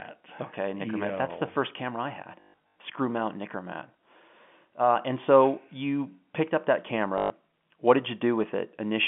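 Speech over a telephone-band line (about 150 Hz to 3.4 kHz, consistent with G.711 telephone coding) breaks into a short robotic stutter twice: a buzzing patch from 2.4 to 2.7 s, and a briefer one from 7.18 to 7.3 s. This is packet loss with the last packet repeated. About 260 ms went missing in scattered gaps across roughly 360 ms in the first event, with the longest run near 140 ms, and about 120 ms went missing in the second. The receiver replayed the last good chunk to fill each gap. The repeats fall out of step with the pitch, so sustained runs buzz at about 50 Hz, which fits 20 ms packets.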